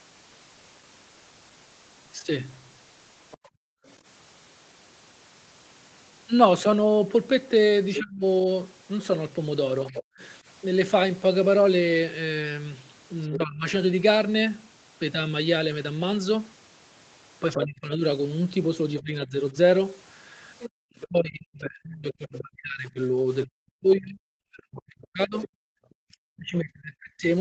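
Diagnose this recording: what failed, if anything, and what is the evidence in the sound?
The fault lies in the call processing stage, in the echo canceller. A second, fainter voice runs under the talker at 3.31–3.91 s, about 25 dB down; at 7.95–13.36 s, only about 10 dB down; and at 17.51–25.48 s, about 15 dB down. This is the other side's voice leaking through, likely far-end loudspeaker sound that the canceller failed to subtract. On a spectrogram it appears as a second set of harmonic stripes overlapping the main voice.

The same canceller produces background gated by the echo canceller. The room sound drops out by about 40 dB at 3.41–3.85 s, for roughly 0.4 s; at 20.70–20.78 s, for under a tenth of a second; and at 25.66–25.84 s, for about 0.2 s. The suppressor clamped the microphone while it judged the loudspeaker active. On the waveform these are flat, near-silent notches in the noise floor. 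On the spectrogram they are vertical dark gaps across all bands.

There is also speech suppressed in double talk. At 8.00–10.06 s the talker's level dips in short pieces totalling roughly 0.3 s, at worst about 30 dB down. At 13.29–13.66 s it dips about 20 dB. From 17.56 s to the end it is cut in pieces as much as about 40 dB down. The likely cause is the canceller treating overlapping near and far speech as echo and attenuating both. The waveform shows chopped, uneven envelopes. Throughout, nothing appears above 8 kHz, consistent with the wideband Opus call path.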